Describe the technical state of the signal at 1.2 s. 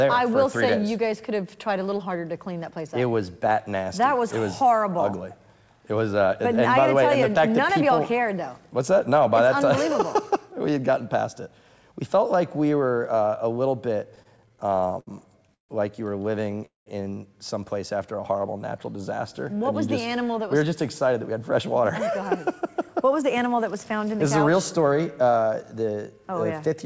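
At 1.2 s the audio is intact, with no fault present, and the only thing to hear is the ordinary character of the call path, whose band stops at 8 kHz.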